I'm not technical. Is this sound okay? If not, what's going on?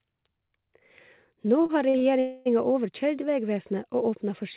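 No. From 1.62 to 2.04 s there are repeated stalls (stutter): the speech catches four times, each hiccup lasting up to about 40 ms, filling about a third of that stretch. Packets arrived late, so the receiver briefly stretched the last sound each time. Nothing is lost, but it drags.

From 2.20 to 2.48 s comes a call audio freeze: the speech halts for about a quarter of a second, held as a fading buzz rather than silence, then resumes exactly where it stopped. The likely cause is a burst of delayed packets on the network.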